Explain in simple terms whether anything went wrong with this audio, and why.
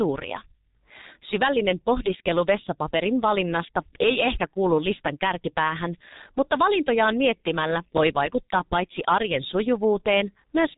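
Throughout, the speech passed through the G.723.1 codec, an old internet-phone compressor that drops everything above 3.8 kHz, so it sounds muffled and hoarse.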